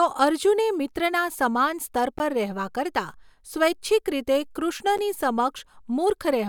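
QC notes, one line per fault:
2.19 s, block of digital silence: just after "સમાન સ્તર" the speech drops to silence for 15 ms and resumes with no fade. The abrupt edges make a brief tick-like hole. Unlike concealed packet loss, nothing smeared or repeated fills the gap, which likely points to an output buffer not being filled in time.
4.98 s, block of digital silence: a shorter 10 ms zeroed block with the same hard edges, heard as a tick or dip.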